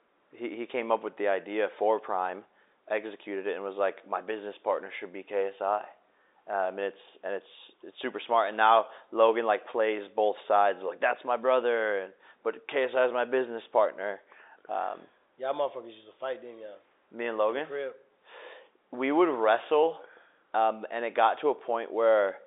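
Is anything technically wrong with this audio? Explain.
No, nothing's wrong here; it's just ordinary G.711 telephone coding at work, which is why the speech sits in the usual phone band of roughly 300 Hz to 3.7 kHz with nothing above about 3.8 kHz.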